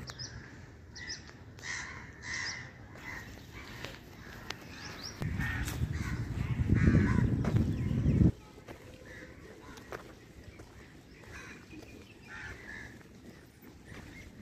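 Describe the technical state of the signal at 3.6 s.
Nothing in the signal at 3.6 s indicates a technical fault; the audio is intact at that moment.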